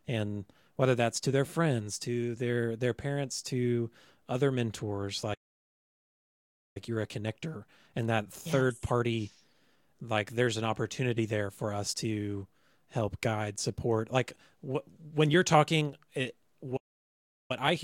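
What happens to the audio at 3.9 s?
Nothing goes wrong at 3.9 s; the speech carries on intact through that moment with no audible fault.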